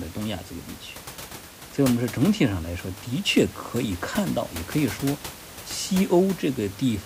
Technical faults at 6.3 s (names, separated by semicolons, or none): none